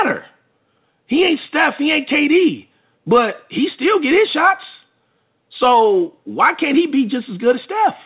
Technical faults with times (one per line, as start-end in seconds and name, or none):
none